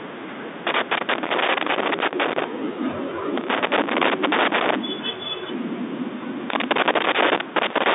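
Bursts of loose connector crackle break into the speech from 0.67 to 2.44 s, again from 3.38 to 4.76 s, and from 6.50 s to the end. A worn or dirty contact is making and breaking as it shifts. Each break chops the signal, and any DC on the line turns into pops. It sounds like irregular scratching over the telephone-band audio, which tops out near 3.8 kHz.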